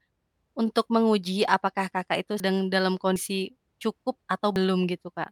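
At 2.4 s, 3.16 s and 4.56 s the speech lurches forward, losing roughly 100, 70 and 40 ms with no gap of silence. This is likely a dropped buffer (overrun): samples overwritten before collection, leaving the neighbouring audio spliced together.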